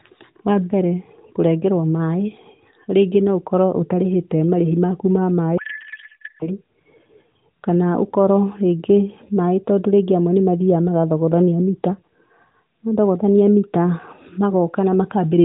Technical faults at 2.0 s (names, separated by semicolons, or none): none